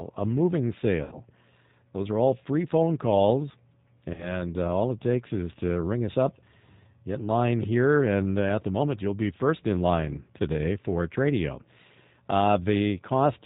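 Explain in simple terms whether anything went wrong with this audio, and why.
Throughout the recording the speech sounds slightly rough, thin and synthetic, with nothing bright or crisp at the top. That is the G.729 codec, a phone-call format that rebuilds speech from a simplified model of the voice and discards the higher sounds to save data.

At about 1.03 to 1.15 s, and again from 4.14 to 4.45 s, the voice briefly turns into a buzzy, smeared tone that fades, then comes back weak. This is VoIP packet loss concealed by the speech codec. About 80 ms and then 40 ms of audio went missing, and the decoder filled each gap by stretching the last sound it had. Because each moment is built from the one before, the voice takes a little time to recover, so the second disturbance lasts longer than the gap itself.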